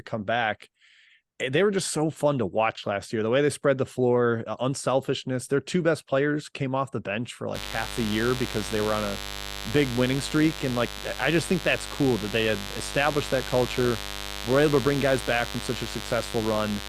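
From 7.54 s to the end there's mains buzz: something like a dimmer or an unshielded lead is injecting sharp spikes on a 50 Hz supply, so a raspy harmonic-rich buzz sits fairly loud, not far under the speech.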